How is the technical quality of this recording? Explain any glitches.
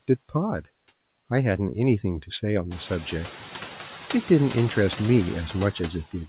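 The recording has one processing fault that runs through the whole clip. The speech band stops at 4 kHz, which points to a narrowband telephone codec, and the room noise swells by about 14 dB around 2.5 s.

Noise suppressor artifacts, throughout: the suppressor judges which frequency bands hold steady background and turns them down frame by frame, by about 10 dB here. The noise therefore drops away in the gaps between words and climbs back up underneath the speech, which gives a pumping effect.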